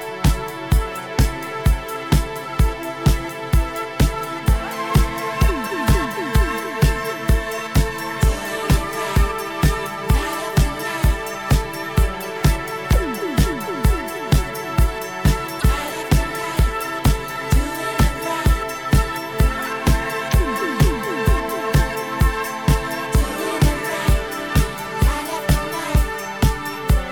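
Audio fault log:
15.58–15.64 s, damaged data in a compressed stream: corrupted bytes make the decoder misread frames and lose sync, leaving a brief glitch before it finds the next frame header.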